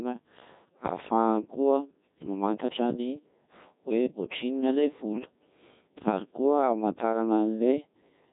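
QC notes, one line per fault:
Throughout, Codec 2 vocoder: the whole clip has that robotic, buzzy quality you get when the waveform is thrown away and rebuilt from sine waves using only pitch, voicing, energy and a rough spectral shape. Damage is heavy, and the coarse, smeared detail points to a very low rate, something like 1.6 kbit/s. There's nothing above 3.8 kHz either, so the top end is gone and everything sounds boxed in.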